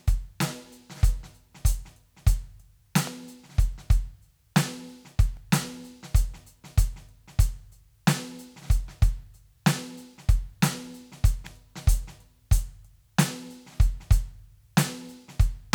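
It's a music clip with two kinds of trouble. There's an electrical switching spike at 3.07 s and again at 11.46 s: a sharp snap sitting on top of the music each time, most likely a nearby switch, motor or static discharge arcing and getting picked up by the audio line. Then at 5.37 s comes a repeated buffer. A tiny slice of about 1.33 ms, which fits a 64-sample buffer, gets played twice more because fresh audio didn't arrive in time. With chunks that small, the hard joins come across as a quick click or buzz rather than a stutter, and essentially nothing is lost.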